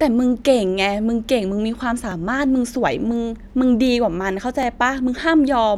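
Overlapping chunks at 2.11 s and 4.63 s: the speech was handled in blocks about 2.5 s long, each starting roughly 13 ms before the previous one ended, so that sliver plays twice at every join. Each repeat is heard as a brief click or stutter.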